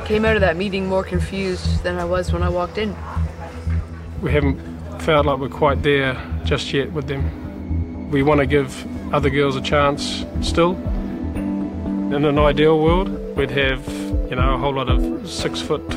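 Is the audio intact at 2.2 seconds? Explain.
Yes, the audio at 2.2 seconds is intact, with no dropout, click, distortion or other fault audible at that moment.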